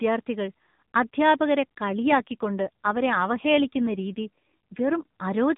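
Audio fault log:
1.88–5.23 s, AMR rate drop: the speech turns rougher and more synthetic, with a buzzy, coarse quality, yet the band stays the same and there is no gap. Before 1.88 s the narrowband mobile codec sounds only lightly coloured. The change in texture fits the network moving the codec from about 12.2 kbps down to about 5.9 kbps, likely because of a weak radio link, leaving fewer bits for each frame's pulse model before the higher rate returns.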